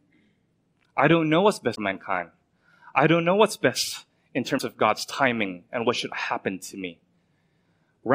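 Damaged data in the compressed stream of this speech clip garbles it twice, so the decoder misreads the frames there and has to resync, leaving a brief blip from 1.72 to 1.78 s after "I don't know what's" and again from 4.55 to 4.61 s after "know what's best in".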